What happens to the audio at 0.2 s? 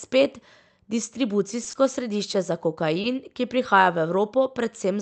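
Nothing goes wrong at 0.2 s: the speech passes through intact, carrying only the ordinary character of the call codec path it travelled through.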